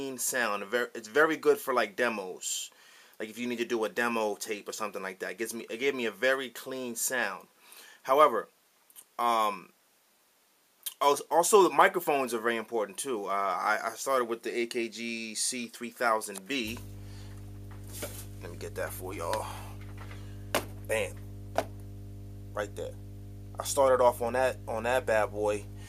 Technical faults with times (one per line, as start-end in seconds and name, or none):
16.63-25.89 mains hum